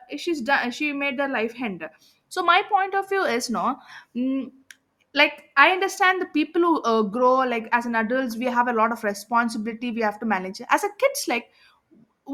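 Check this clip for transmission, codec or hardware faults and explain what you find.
Nothing stands out as a fault in this bit of speech, so there's nothing to report.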